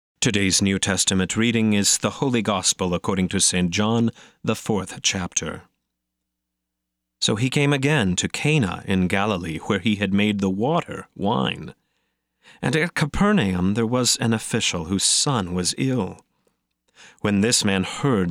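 No technical faults can be heard anywhere in the recording; the speech signal stays steady and intact throughout.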